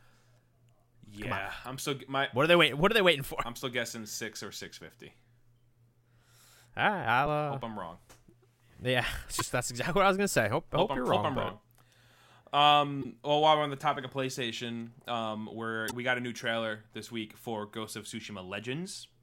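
At 1.64 s, then 7.22–7.27, 9.37–9.41, 13.00–13.05 and 15.87–15.93 s, damaged data in the compressed stream makes the decoder misread frames and lose sync. Each event is a short glitch in the speech, seen as a thin broadband vertical streak on a spectrogram and a brief break in the waveform.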